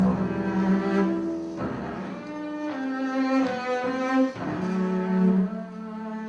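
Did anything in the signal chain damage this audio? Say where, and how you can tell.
No, there's no audible sign of damage from any stage of the signal chain anywhere in this audio.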